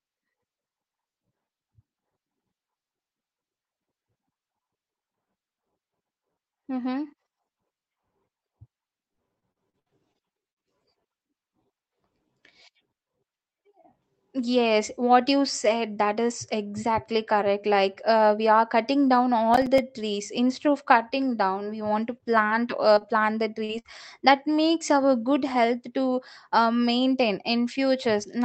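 From 9.13 to 10.58 s the speech turns choppy and robotic, with pieces dropping out. This is repeated packet loss: eight gaps, the longest about 63 ms, each patched by stretching the last sound.

Between 19.54 and 19.78 s a gritty crackle tears across the audio. This is processor overload crackle: roughly seven audio buffers of about 5 ms each missed their deadline and were left as silence, leaving hard-edged holes.

Brief smears follow at 22.18, 22.95, 22.99 and 23.64 s. These are short concealed packet losses, 20 to 40 ms each, that the receiver filled by continuing the preceding sound.

At 23.79 to 23.87 s comes a held buzz or fading hiss with a chunk missing. This is a burst of packet loss of about 60 ms, bridged by extending and fading the last sound. Throughout, the Opus call path limits the top end to about 8 kHz, which fits a 24 kbps setting.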